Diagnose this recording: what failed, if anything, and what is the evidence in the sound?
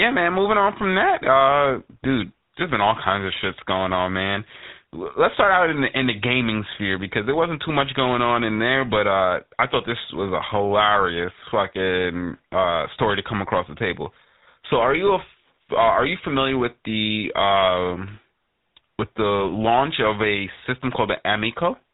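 Codec stage: GSM full-rate coding throughout. Speech stops at 4 kHz with a buzzy, gravelly grain, fitting 13 kbps pulse excitation, unlike smooth plain band-limiting.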